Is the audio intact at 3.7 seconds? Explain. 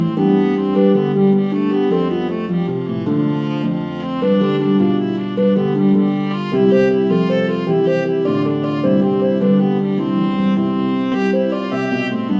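Yes, at 3.7 seconds the audio plays through cleanly, with no dropout, click, distortion or other fault at that moment.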